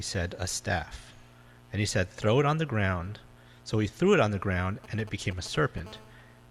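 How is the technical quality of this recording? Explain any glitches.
Two bursts of mobile-phone interference spoil the end of the recording.

From 4.84 to 5.8 s, GSM signalling bursts: a nearby 2G phone's radio pulses, rectified by the audio circuit, give galloping ticks and brief 217 Hz buzzes, roughly 20 dB down. They appear as spaced vertical stripes on a spectrogram.

From 5.86 to 6.46 s, a steady GSM phone buzz at 217 Hz, about 26 dB below the signal, from a call's continuous bursts. It sounds hard and raspy, with evenly stacked harmonic lines and a regular pulse train on the waveform.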